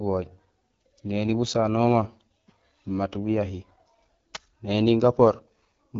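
Rough, raspy speech with a dull top, nothing above about 7.1 kHz throughout, from AMR wideband (HD Voice) codec coding at a low rate, likely near 8.85 kbit/s.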